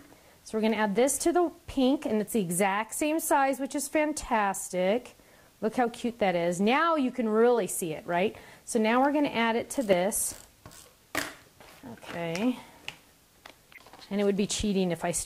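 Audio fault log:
4.21–4.25 s, 5.86 s, 7.57–7.60 s, 9.90–9.93 s, 13.74–13.78 s: corrupt frame decoded. Damaged compressed frames, one each except roughly two near 9.9 s, were decoded anyway, so energy lands at the wrong frequencies and you hear brief chirps or noise blips. These show as short vertical smears on a spectrogram and small waveform spikes, faint near 5.9 s and 13.7 s, loudest near 9.9 s.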